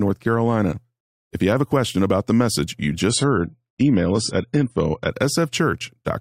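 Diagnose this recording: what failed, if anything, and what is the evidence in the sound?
Network-stage fault: an adaptive stream at a lower bitrate. From 3.10 to 5.10 s the speech loses everything above 10 kHz and codec artefacts rise. The change is sudden, with no gap. This fits a switch from roughly 96 to 24 kbit/s AAC.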